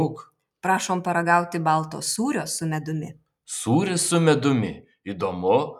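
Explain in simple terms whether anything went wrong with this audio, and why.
The noise suppressor mistook part of the audio for noise: between 0.19 and 0.41 s, the sound cut by the noise suppressor drops in level for a split second.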